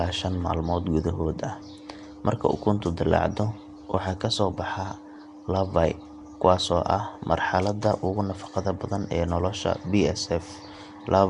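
Nellymoser compression runs through the whole clip: the speech carries a rough, hissy halo and a smeared, underwater quality, with nothing above 10.6 kHz. This likely comes from Flash's Nellymoser Asao codec at a rate that fits about 44 kbps, starving weak bands of bits and filling them with noise.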